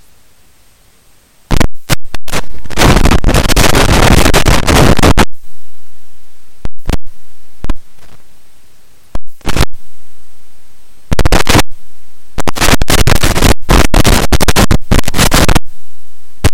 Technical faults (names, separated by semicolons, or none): periodic USB or driver dropouts